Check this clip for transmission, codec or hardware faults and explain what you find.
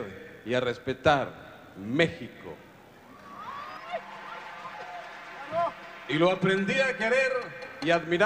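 One fault is audible: channel delay with comb filtering, from 3.77 s to 7.65 s. In that stretch one channel arrives around 5 ms behind the other, and when the two are folded to mono the shared content cancels at regularly spaced frequencies, the lowest near 100 Hz with further notches repeating roughly every 200 Hz above it. The result is a hollow, phasey colouration that stays fixed in the spectrum until the delay clears.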